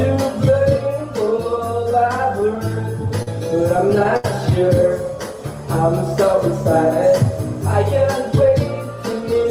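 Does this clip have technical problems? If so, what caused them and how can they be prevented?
Yes, there are repeated stalls (stutter). Packets arrived late, so the jitter buffer kept running dry and the receiver stretched the last sound to fill the gaps: seven between 2.40 and 3.28 s, then four between 3.77 and 4.25 s, the longest 74 ms. The audio drags and hiccups. A larger adaptive jitter buffer and a steadier network path would prevent it.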